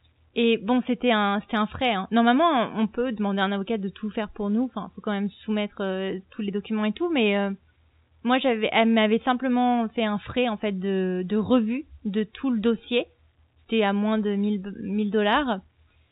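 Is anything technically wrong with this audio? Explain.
No, nothing in this speech recording is technically wrong. It has the sound of an ordinary G.711 telephone line, with nothing above 4 kHz and a faint quantisation hiss about 38 dB below the speech that rises and falls with its level, as that coding always produces.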